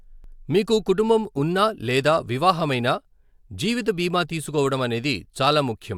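No technical faults are audible in this speech.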